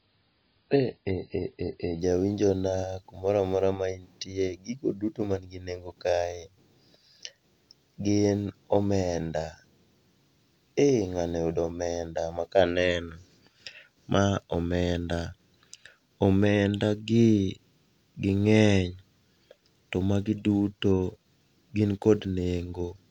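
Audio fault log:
0.00–2.00 s, adaptive stream starting at a low bitrate: the speech opens muffled and smeary, with nothing above 5 kHz, fitting a very low-bitrate MP3 before a jump to a much higher rate just before "jawinjona kumora mora ma". The spectrogram's upper band is empty, then fills abruptly; the waveform shows no gap.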